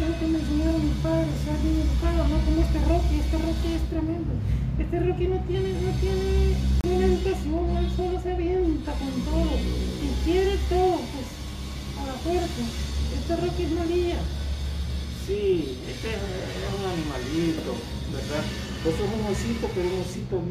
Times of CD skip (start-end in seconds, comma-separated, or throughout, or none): 6.81-6.84